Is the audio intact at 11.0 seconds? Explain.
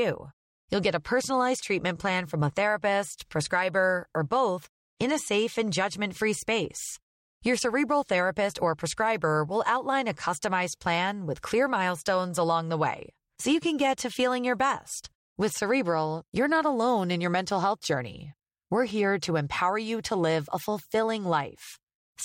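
Yes, the audio is intact at 11.0 seconds, with the speech continuing cleanly and no dropout, click, distortion or other fault heard at that moment.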